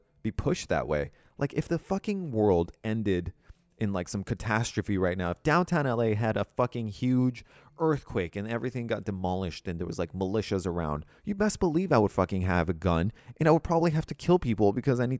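No technical faults turn up anywhere in this speech recording, so there's nothing to flag from one moment to the next.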